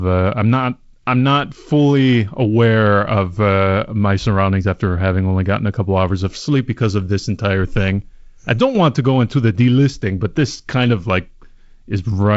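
Speech, carried over G.722 wideband telephone coding with nothing above about 7.7 kHz and a faint upper-band hiss and slight low-band graininess that fit the 48 kbit/s mode. From 6.81 to 8.81 s, between "couple hours of sleep" and "to go into the", pre-emphasis is left on. A CD-style 50/15 µs treble boost goes unreversed, lifting 10 kHz about 8 dB above 1 kHz, so that stretch turns thin, bright and sibilant.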